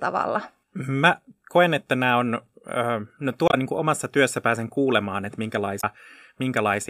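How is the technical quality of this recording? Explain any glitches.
The speech has two brief glitches. Both come from damaged data in a compressed stream. At 3.46 to 3.54 s and 5.77 to 5.84 s, corrupted frames throw the decoder out of sync, causing short glitches in the speech.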